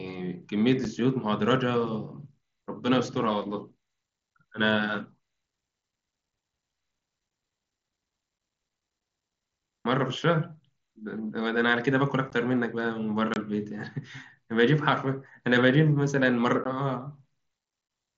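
At 0.84 s and 8.39 s the speech drops out for about 7.5 ms each, which fits a single lost headset packet. It happens again at 12.30 s, from 13.34 to 13.36 s, and at 16.64 s, with gaps of roughly 15, 22.5 and 15 ms that point to runs of two or three packets. This is unconcealed Bluetooth headset packet loss: nothing fills the missing frames, so each hole has hard edges against the light graininess of the wideband mSBC link.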